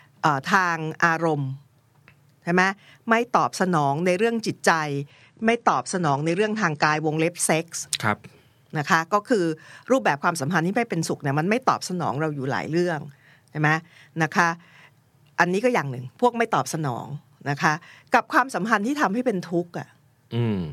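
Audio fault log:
5.10–7.10 s, adaptive stream at a lower bitrate: for two seconds the speech abruptly loses its top end, with nothing above 9.8 kHz, and grows a swirly coding texture, consistent with a drop from around 96 to around 32 kbit/s AAC while the connection slowed. Unlike a dropout or concealed packet loss, there is no gap or stutter. Unlike a fixed filter, quality snaps back just as suddenly at 7.10 s.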